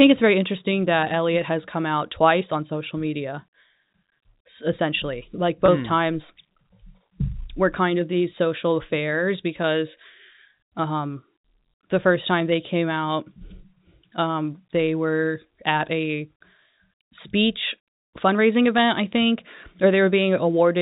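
At 5.66 to 5.68 s, packet loss with pitch repetition occurs. About 20 ms of speech, likely one lost packet, is bridged by repeating a pitch period, briefly giving a held, buzzy tone.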